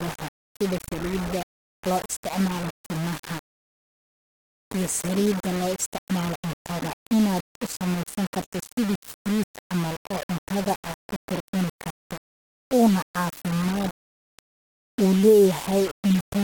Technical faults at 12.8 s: low bit depth without dither

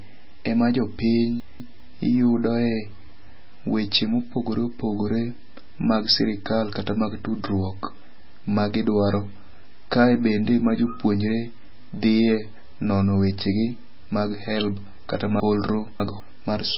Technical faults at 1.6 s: MP3 compression; chunks out of order

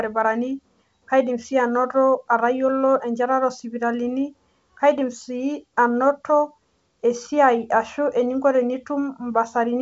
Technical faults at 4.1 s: none

